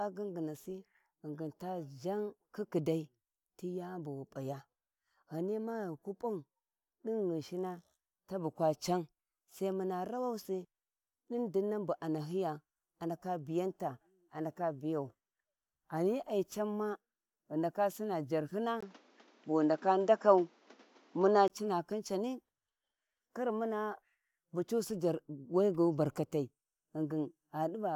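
At 18.81 s, just before "cina khin cani", a 20 ms gap breaks the speech. From there to 21.50 s, nothing reaches above 7.6 kHz. The sound turns dull, shifts in level by about 5 dB, and gains a new noise floor. An input switched to a poorer device is the likely cause.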